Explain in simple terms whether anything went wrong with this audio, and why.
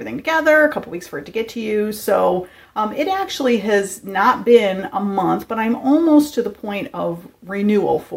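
Nothing went wrong with this audio. Listening all the way through, no technical problem stands out, so there is nothing to explain or fix.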